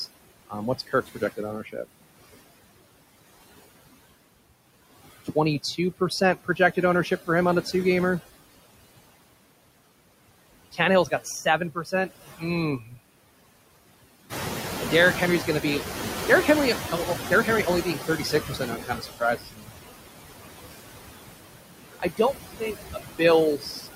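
Noise suppressor artifacts run through the whole recording. The suppressor pulls the steady background down by about 20 dB, frame by frame, so the noise floor drops in the gaps and swells back under the speech. On a spectrogram the background is patchy, with isolated time-frequency specks flickering on and off instead of forming a smooth, even haze.

Speech cut by the noise suppressor happens seven times: 0.87–2.02 s (dips of up to about 21 dB), 5.25–6.77 s just before "ownership for him on" (about 18 dB), 10.72–12.43 s (about 15 dB), 12.79–12.99 s (about 11 dB), 16.91–19.7 s (about 20 dB, roughly a second in total), 21.93–23.21 s (about 19 dB), and 23.57–23.88 s (about 15 dB). In each span the suppressor mistook soft speech for noise, so parts of the speech sound swallowed or faint. On the waveform these appear as brief, sudden notches in the envelope, and on the spectrogram the weak speech energy is missing.

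The noise suppressor catching up runs from 14.29 to 18.75 s. The room noise, which belongs to the recording itself, rises by about 10 dB near 14.5 s. The suppressor's noise estimate lags behind, so the louder noise first comes through with less reduction. It then sinks over about 4.5 seconds to a cut of about 13 dB. On a spectrogram the background band brightens abruptly and then fades gradually.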